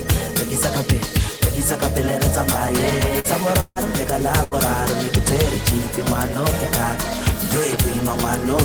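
The audio has two bursts of packet loss and one longer gap. The first burst runs from 3.19 to 3.27 s, the second from 4.44 to 4.54 s. In each, the last sound is stretched into a fading buzz or hiss, for 48 ms and then 77 ms. The audio then resumes with about 40 ms and 80 ms missing. Between them, from 3.60 to 3.79 s, the sound is held and fades for about 154 ms, then drops to silence for 30 ms. Roughly 160 ms of audio is gone, likely a long network dropout.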